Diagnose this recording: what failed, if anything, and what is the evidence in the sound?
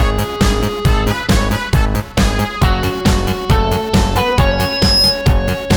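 Loudspeaker feedback squeal from the analogue acoustic loop between microphone and playback speaker. From 4.50 to 5.24 s a single 5.1 kHz tone swells over about half a second to roughly 5 dB above the sound. That gradual growth, rather than a constant level, separates it from steady electrical whine or interference.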